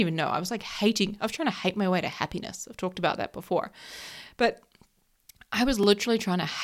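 At 5.83 s the speech drops into a block of digital silence about 2 ms long, where samples were zeroed, likely because the output buffer went unfilled in time. The abrupt cut and return with no fade make a tick or dip.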